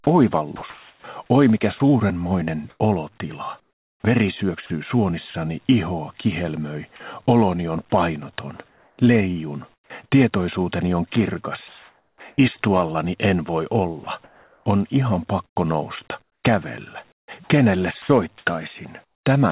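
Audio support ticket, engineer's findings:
Sound chopped by the voice detector, 0.56–5.34 s and 14.04–19.26 s. Choppy sound, with holes. About 1.0 s and 1.3 s replaced. Likely sender VAD toggling, comfort noise filling the gaps.

Sound dropped by the voice detector, 6.96–7.00 s. About 30 ms of sound gives way to steady noise or near silence. Likely sender VAD misjudging quiet sound as background, receiver playing comfort noise.

Comfort noise in place of the background, 8.68–9.90 s and 11.68–12.20 s. Real background becomes flat, featureless noise. Second gap about 2 dB quieter, about 41 dB below loud passages. Likely DTX pause filled by comfort noise.

Onset clipped by the voice detector, 9.88–9.90 s and 12.17–12.20 s. Sound starts abruptly, first 20 ms and 30 ms missing. Likely slow VAD re-trigger, comfort noise covering the lost start.

Nothing above 4 kHz on the call path, which fits G.711 A-law at 64 kbps.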